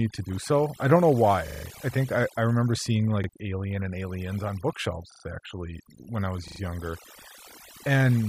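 Throughout, overdone noise removal pushes bands near the noise estimate far down, leaving a reduced, twinkling background. From 1.48 to 1.64 s, a repeated buffer occurs: late audio makes the device replay the same 40 ms piece, heard as a hard-edged stutter. It recurs at 3.24 s after "I I remember seeing", at 5.12 s after "on bookshelves", and at 6.48 s after "actually when I was".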